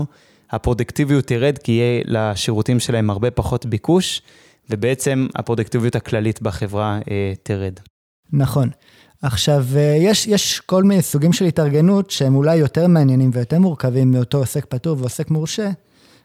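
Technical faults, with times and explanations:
No technical faults can be heard anywhere in this speech recording. There is nothing to time or explain.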